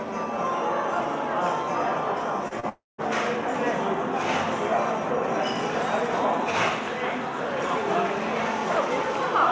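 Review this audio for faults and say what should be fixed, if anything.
Short concealed packet loss occurs at 2.48–2.54 s and 2.60–2.66 s. Each time about 30 ms went missing. The receiver extended the preceding sound, leaving a brief smear.

A long network dropout begins at 2.69 s and ends at 3.01 s. The sound stretches into a fading buzz, then about 0.19 s of silence. This is likely a lost connection, with roughly 0.3 s never played.

Through the G.722 call path, nothing above 8 kHz is present. A steadier network link with more jitter-buffer headroom would prevent these gaps.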